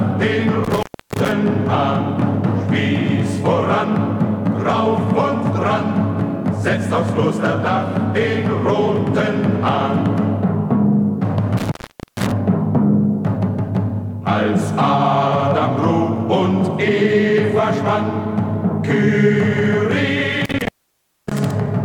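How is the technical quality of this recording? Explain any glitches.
The recording is marred by three dropouts from an intermittent contact, at 0.64–1.32 s, 11.57–12.32 s and 20.45–21.51 s. Each time, a loose plug or cable briefly breaks the signal path, opening for about 0.30 s, 0.46 s and 0.59 s respectively. The sound cuts out with crackle at each edge and only faint hiss remains. On a waveform the signal collapses to a thin noise floor between spiky bursts. A spectrogram shows broadband vertical streaks framing a near-empty band.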